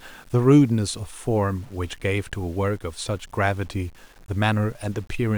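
From start to finish the speech carries a grainy, rasping distortion that rises and falls with the voice itself, sitting around 30 dB below the level of the speech. Quiet syllables and decaying word endings turn gritty and sputter or drop out rather than fading smoothly. This is likely low bit depth without dither, consistent with rounding to about 8 bits. Unlike dithered reduction, which leaves a steady hiss, this error follows the signal and stops when it stops.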